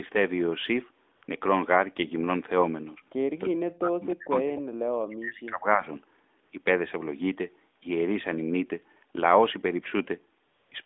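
Speech over a narrowband AMR mobile line, with a 250 Hz to 3.6 kHz band. AMR comfort noise replaces the real background four times: 1.16 to 1.22 s, 1.24 to 1.28 s, 6.44 to 6.52 s, and 10.48 to 10.72 s. The phone stopped sending speech frames for 60, 40, 80 and 240 ms. Smooth synthetic hiss fills each gap and switches in and out. From 3.43 to 5.89 s the speech dips and breaks up, for about 2 s in total. At its deepest it drops by about 40 dB. This is likely speech suppressed in double talk, with the echo canceller ducking the talker while the far end speaks. At 4.56 to 4.60 s, a brief scrap of echo leak appears, likely from a loudspeaker on one side of the call. It is a delayed copy about 0.3 s behind and about 20 dB below the voice.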